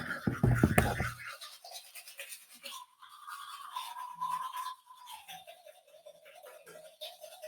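A noise suppressor applied to music or sounds stays on for the whole clip. Built for speech, it treats steady content as noise. Level swings by around 10 dB as it reacts. Attacks pass, but held sound and tails sink and pump.

Sound cut by the noise suppressor is clearest in five spots: 1.82 to 2.16 s, 2.33 to 2.65 s, 2.85 to 3.18 s, 4.76 to 5.10 s, and 5.55 to 5.99 s. Each dips by about 9 to 11 dB. Sustained parts thin out and decays end early.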